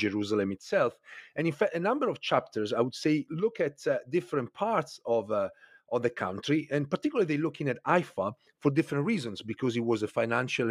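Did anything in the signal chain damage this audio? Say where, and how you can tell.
No, nothing in the signal chain damaged this audio.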